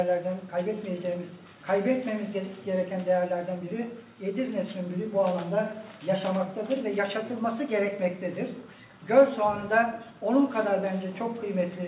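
No technical faults can be heard anywhere in the clip. The audio has gone through a call path that is working as intended, and its narrow telephone-style band with nothing above 4 kHz fits a G.711 A-law codec.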